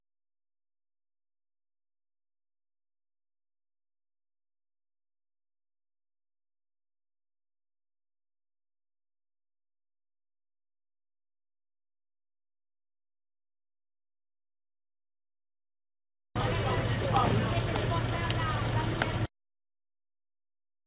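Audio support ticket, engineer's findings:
No fault found; audio passes through the WebRTC call path with G.711 A-law at 64 kbps, band-limited to 4 kHz as that codec sets.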